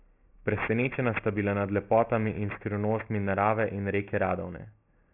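Aliasing runs through the whole clip. The speech was brought down to a lower sample rate without a proper low-pass filter first. The band stops hard at about 3 kHz, which fits a new rate near 6 kHz. Energy above that edge was not removed. It folded back below 3 kHz as false, unrelated tones, roughly 15 dB under the speech. Sibilants sound gritty and metallic. A harsh, clangy haze sits over the upper voice.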